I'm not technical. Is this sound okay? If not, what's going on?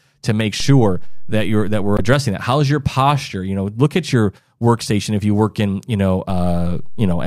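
No, there are two kinds of fault.

The first is a DC step. The signal's resting point, the centre line that the sound wave swings around, suddenly shifts to a new level, much as if a slightly offset input had been switched in. The speech carries on unchanged, but each shift is heard as a low thump or click. This happens at 0.60 s, with a step back at 2.13 s, and again at 6.30 s, where the shifted level holds until the clip ends.

The second is damaged data in a compressed stream. A small piece of the compressed file is corrupted, so the decoder misreads it, briefly loses its place and searches for the next clean section before carrying on. From 1.96 to 2.01 s that corruption comes out as a short chirp or blip cutting into the speech, just before the first DC step returns to normal.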